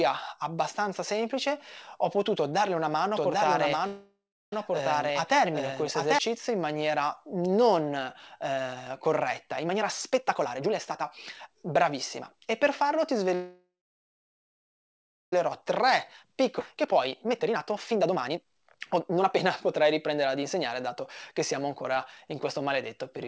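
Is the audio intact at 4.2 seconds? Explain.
No. A doubled audio track runs from 3.16 to 6.19 s: a second, equally loud copy trails about 0.7 s behind, likely from an out-of-step edit or slower capture path. A call audio freeze spans 3.87 to 4.53 s, with a fading buzz or hiss and then 0.35 s of silence, likely from an emptied jitter buffer. The sound then resumes with nothing lost.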